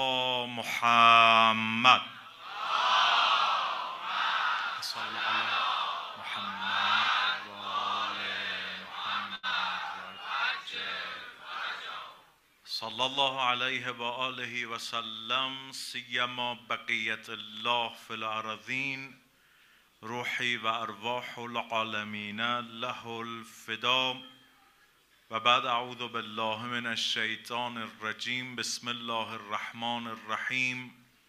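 A short stall from a late packet comes at 9.35 to 9.45 s: the jitter buffer ran dry, so the last sound is held for 78 ms with nothing lost. A short concealed packet loss follows at 9.51 to 9.53 s, where 20 ms never arrived and was patched from the preceding audio, leaving a brief smear or wobble. A call bitrate drop runs from 9.83 to 14.58 s, with the encoder falling from 128 to 16 kbps and staying at its lowest for 2.46 s. The sound turns coarse, watery and muffled, losing its top end until the rate recovers.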